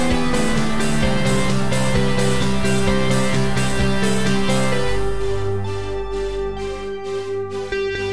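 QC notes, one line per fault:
No faults are heard anywhere in the clip. Nothing here calls for a QC note.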